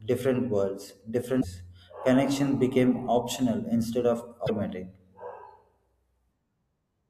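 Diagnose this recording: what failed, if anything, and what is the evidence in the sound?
Damaged data in a compressed stream, at the codec stage: 70 ms glitches at 1.37 s, after "different worlds", and at 4.43 s, after "became optional instead of". The decoder misreads the corrupt frames, loses sync and searches for the next frame header.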